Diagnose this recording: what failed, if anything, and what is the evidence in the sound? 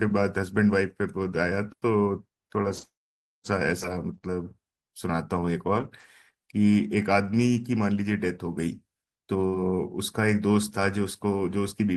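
Between about 2.65 and 9.54 s the speech picks up a few brief ticks and small smears, roughly three separate hiccups, the longest around 40 ms, while the rest stays clear. These are scattered short gaps at the network stage. Around 80 ms of audio in total went missing as isolated packets were lost or arrived late, and the receiver bridged each hole by extending the preceding sound, stretching its concealment over about 300 ms.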